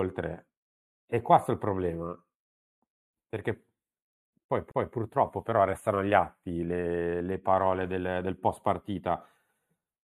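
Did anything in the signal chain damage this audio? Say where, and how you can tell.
Yes. The speech sounds hollow and a bit phasey all the way through. That's channel delay causing comb filtering at the stereo-to-mono fold-down: one channel arrives roughly 0.1 ms late, which fits a four-sample offset. Summing the two cuts evenly spaced notches, starting around 5 kHz.

There's also a CD skip at the playback stage, from 4.71 to 4.74 s. You get a short gap of roughly 30 ms of silence, then the audio resumes from a different point because the laser jumped to another turn of the spiral.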